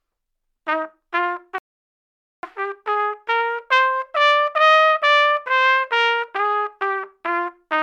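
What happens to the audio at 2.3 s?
At 2.3 s the audio is inside a rebuffering stall that runs from 1.58 s to 2.43 s. The player exhausted its downloaded audio and halted playback until more data arrived, so the sound drops to silence for about 0.85 s. When the data catches up, playback resumes at exactly the point where it stopped. No material is skipped or repeated; the stall only inserts dead time into the timeline.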